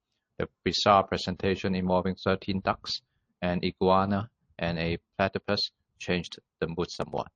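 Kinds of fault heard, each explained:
MP3 compression: The whole clip sounds watery and swirly, with sibilant chirps as weak frequency components drop in and out between frames. The damage is plainly audible, likely from MP3 encoding at a low bitrate around 40 kbps.
Pre-echo: Just before the attack at 1.36 to 1.40 s, a short hiss rises about 17 dB above the preceding quiet and spreads about 33 ms ahead of it, softening the onset. This fits coding noise filling a long block of about 50 ms without short-block switching.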